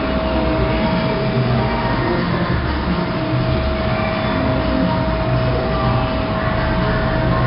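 Throughout the clip, the audio has passed through 4-bit ADPCM compression. Each sample is coded as a coarse step from a prediction, with an adaptive step size that lags behind sudden changes. The result is heavy damage: a gritty hiss rides on every loud passage and rises and falls with the level, and sharp attacks come out roughened. Nothing is heard above about 5.3 kHz, which fits a low sample rate near 11 kHz and a bitrate around 44 kbps, so the whole clip also sounds dull.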